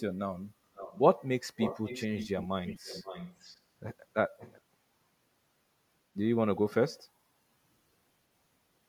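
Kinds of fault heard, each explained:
Echo leak: a faint copy of the speech returns 531 ms late, some 10 to 20 dB below it, at 0.75 to 1.0, 1.56 to 2.47, 2.66 to 3.6 and 4.38 to 4.61 s. This is likely a far-end echo canceller letting loudspeaker pickup through. A spectrogram shows the same harmonic and formant patterns repeated faintly half a second later, and the waveform shows small ghost bursts trailing the louder stretches.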